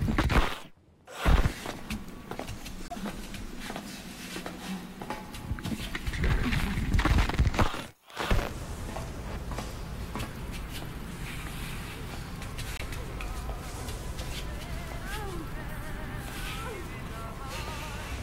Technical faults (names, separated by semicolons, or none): corrupt frame muted